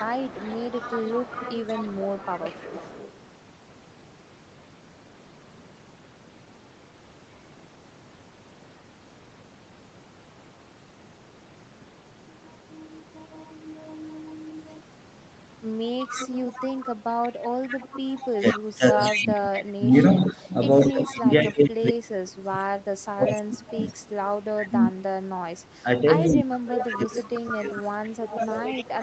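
Right from the start, 0.0 to 3.1 s, there's an echo leak: a faint delayed copy of the speech trailing about 183 ms behind, roughly 15 dB under the main voice. It comes back at the same level from 16.01 to 21.92 s, then louder, around 10 dB down, in a short burst at 23.26 to 23.92 s and again from 26.8 s to the end. That steady 183 ms lag points to a speakerphone on the far side whose echo canceller likely let part of its own loudspeaker output back into the mic.

Overlapping that, from 18.33 s through to the end, you get speech suppressed in double talk. The talker's level keeps ducking and breaking up while the other side is talking, dropping by as much as 30 dB or so at its worst. This is the pattern you'd expect when the canceller can't tell the local talker apart from the echo and pulls both down together.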